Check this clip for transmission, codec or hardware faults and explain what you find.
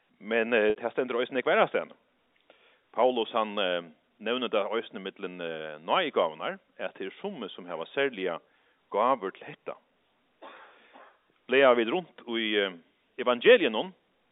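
One transmission fault stands out, heard through the telephone-band G.711 coding that limits the sound to roughly 250 Hz to 3.7 kHz.

Packet loss with pitch repetition, 0.70 to 0.76 s: about 60 ms of audio went missing, which fits six 10 ms packets. The receiver filled the gap by looping the last pitch period, producing a brief held, buzzy tone. A spectrogram shows flat, frozen harmonics, and the waveform shows identical repeating cycles that shrink as they fade.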